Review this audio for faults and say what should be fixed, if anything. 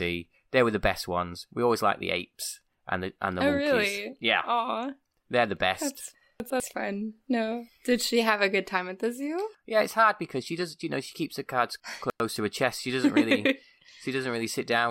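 Chunks out of order at 6.4 to 6.6 s and 11.8 to 12.2 s, after "she keeps her cards". A 100 ms chunk plays one, then three, chunks late. Each causes a jumbled moment. Reorder incoming chunks by sequence number before writing or playback.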